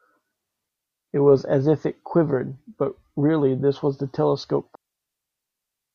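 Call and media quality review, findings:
Digital wireless dropout, two events: 0.69 to 1.08 s (0.39 s) and 4.75 s to end (1.2 s). Speech cut to clean near-silence, no noise burst either side. Receiver muting after losing too much link data, short fade into mute.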